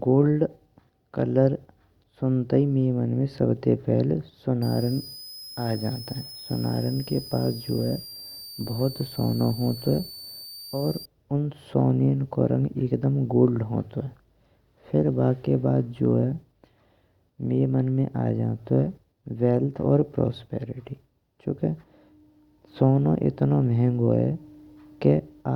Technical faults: switching supply whistle

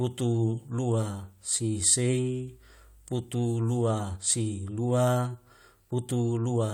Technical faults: none

